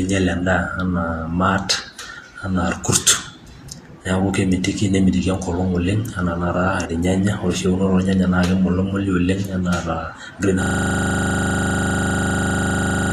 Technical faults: Vorbis compression; system hang loop

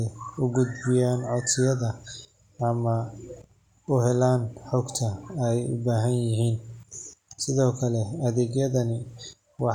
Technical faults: none

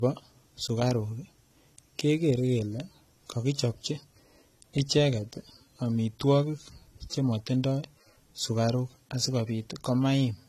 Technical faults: low-bitrate audio saved at a high bitrate

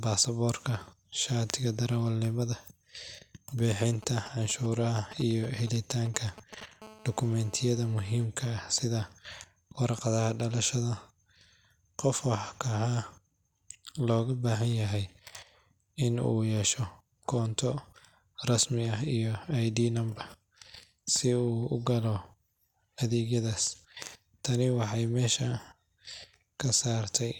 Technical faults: GSM signalling bursts; GSM phone buzz

